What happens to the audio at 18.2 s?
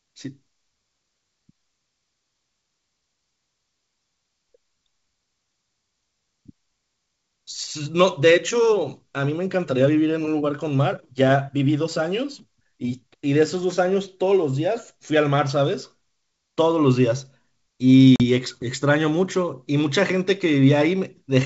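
Packet loss on the ADPCM call knocks the decoder's predictor out of sync: a hard silence from 18.16 to 18.21 s, then sound returns slightly distorted.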